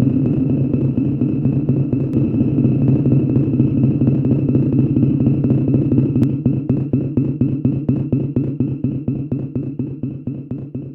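From 2.13 to 6.23 s the sound plays twice, a full-band copy trailing about one and a half seconds behind at roughly equal level: a doubled audio track, likely from a second, slower capture path.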